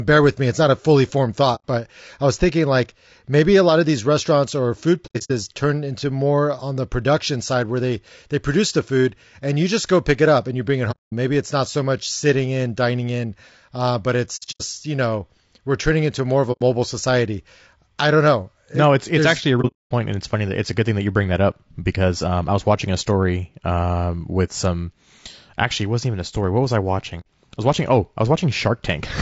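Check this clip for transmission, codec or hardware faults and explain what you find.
Two faults are audible in this speech: grainy low-delay coding throughout, and seven soft dropouts.

Low-delay AAC compression runs the whole way through, likely AAC-ELD at a low rate, which fits about 32 kbps. At this rate too few bits go to the voice's harmonics, so noise fills the gaps between them and the voice sounds rough and grainy. On a spectrogram the harmonic stripes look smeared, with speckled energy between them and a thin, patchy top band.

AAC frame loss with muting occurs at 1.55–1.64 s, 5.06–5.32 s, 10.91–11.12 s, 14.36–14.62 s, 16.52–16.62 s, 19.61–19.91 s and 27.20–27.26 s. Lost frames were decoded as silence, and the overlapping windows taper the sound down and back up, so each gap is a smooth hole. The ones at 5.06, 14.36 and 19.61 s are broken up, with the longest silent stretches about 100 ms, 100 ms and 200 ms. 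On a waveform these show as faded notches. On a spectrogram they are blank vertical bands across all frequencies.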